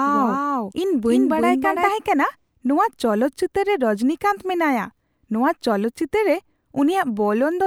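Speech, with a doubled audio track already running at the start and stopping abruptly at 1.9 s: a dry copy around 5 dB down trails by roughly 300 ms, likely a second, slower capture path.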